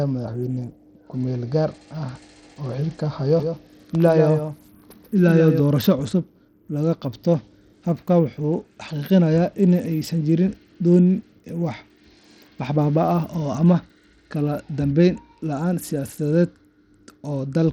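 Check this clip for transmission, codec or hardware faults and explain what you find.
Two faults are audible in this speech recording.

Bluetooth SBC compression, throughout: the sound most likely passed through the SBC codec at a starved bit pool, consistent with roughly 80 kbps. The upper sub-bands receive too few bits, so the treble thins and flickers, with gritty quantisation noise and aliasing clearly heard on the speech.

Doubled audio track, 3.40 to 5.60 s: a second full-band copy of the speech runs about 150 ms behind and about 5 dB quieter, likely from a second, slower capture path being mixed in. It has no reverberant tail and switches on and off abruptly.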